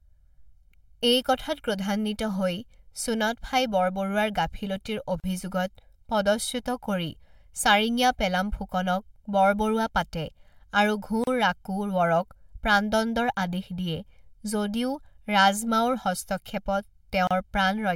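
Throughout the clip, one channel arrives about one and a half milliseconds late and the two are summed to mono. This channel delay causes comb filtering, with fixed notches starting around 400 Hz, so the speech sounds hollow and phasey from start to finish.

At 5.2 to 5.24 s, 11.24 to 11.27 s and 17.27 to 17.31 s, six seconds apart, separately encoded pieces were joined without trimming their encoder delay and padding. Each gap at a join of encoded pieces is a 34 to 38 ms gap with smeared edges, so the silent part is shorter, after which the speech resumes where it stopped.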